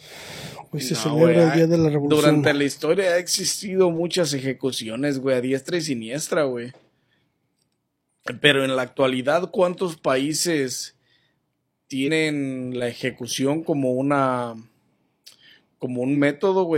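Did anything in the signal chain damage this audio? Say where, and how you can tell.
Yes: compressed frames skipped at the codec at 12.03 s (about two 46.4 ms frames) and 16.12 s (one frame), shown as the audio jumping ahead by roughly 100 ms and 50 ms where those frames were left out.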